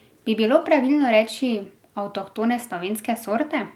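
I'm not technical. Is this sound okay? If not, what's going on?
Yes, nothing in this short speech recording points to a technical problem with how the sound was captured or delivered.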